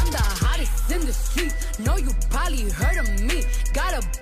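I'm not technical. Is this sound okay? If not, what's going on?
No. Throughout the clip there's a crude rate conversion: the audio was converted to a new sample rate, likely from 44.1 kHz to 48 kHz, by simply repeating samples instead of smoothing. That adds a gritty, buzzy fizz riding on the louder and brighter parts of the sound.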